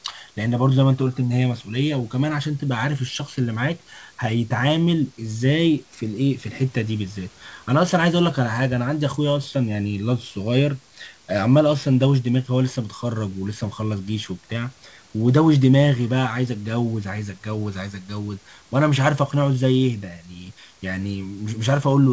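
No technical faults are audible.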